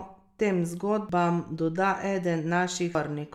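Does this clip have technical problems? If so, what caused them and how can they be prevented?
Yes: damaged data in a compressed stream at 1.09 s and 2.95 s, each a brief glitch in the speech where corrupted bytes made the decoder misread frames and resynchronise on the next header. Checksummed transfer and verified storage of the compressed file prevent it.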